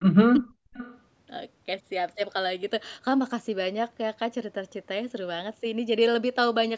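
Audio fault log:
0.14–0.75 s, speech suppressed in double talk: the speech dips hard, roughly 40 dB at worst, for about half a second, likely the canceller ducking both talkers at once.
0.34–0.39 s and 0.74–0.99 s, echo leak: faint delayed copies come back about 351 ms and 376 ms late, around 30 dB then 20 dB down, likely loudspeaker pickup slipping past the canceller.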